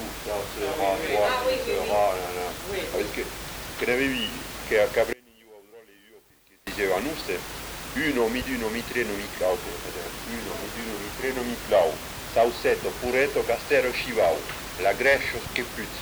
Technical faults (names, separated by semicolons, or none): one channel inverted